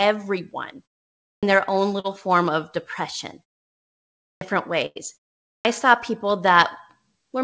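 The output device sleeps through pauses and needs time to wake, so the clipped start after a pause cuts the opening of the next sound. At 1.18 s, after a 0.39 s gap, about 0.25 s vanishes before "their own", which begins abruptly without its first sounds. The same happens at 4.16 s, after 0.79 s of silence, losing about 0.25 s. It happens again at 5.42 s, after 0.32 s, where about 0.23 s is gone before "saw people".

Between 2.00 and 2.06 s there is a short concealed packet loss. About 40 ms of the call reached the decoder too late, between "their own" and "form of depression". The receiver extended the preceding sound to cover the hole and then blended back, leaving a brief smear or wobble where the real audio should be.

At 4.86 to 4.98 s a burst of packet loss removes about 100 ms in a row. The receiver stretched the last sound across the gap while turning it down, giving a held buzz or fading hiss before the audio resumes further on with that stretch missing.

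The call path sounds like G.722 at 64 kbps, with nothing above 8 kHz.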